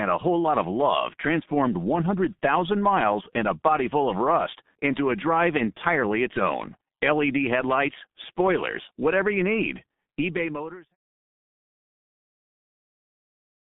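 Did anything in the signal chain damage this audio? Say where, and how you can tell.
Yes, at the codec: the speech has heavy G.723.1 damage throughout. It's squeezed into 150 Hz to 3.6 kHz, hoarse and smeared, which fits long frames at roughly 6 kbit/s.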